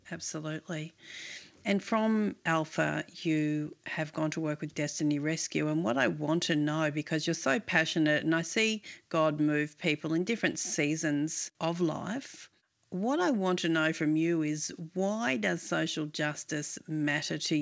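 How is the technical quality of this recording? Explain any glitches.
One glitch stands out early in the speech: a gradual level rise, heard over a call-style path whose bandwidth stops at 8 kHz, which fits a wideband codec such as G.722.

From 0.3 to 1.96 s, automatic gain rising lifts the level by about 4 dB. The gain control judged the input too quiet and ramped up its gain. Voice and background noise swell together, which separates it from a talker simply moving closer or speaking louder.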